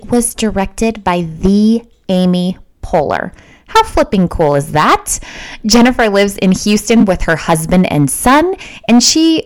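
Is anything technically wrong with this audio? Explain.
Yes, the speech is hard clipped throughout. It has been driven about 14 dB past what the converter or gain stage could pass, so every peak is sliced off flat. Roughly one sample in twenty-five sits at the ceiling. The flat tops add strong harmonics high in the spectrum, heard as a harsh, buzzy fuzz on every louder syllable. The waveform shows squared-off plateaus, and a spectrogram shows bright vertical smears reaching to the top.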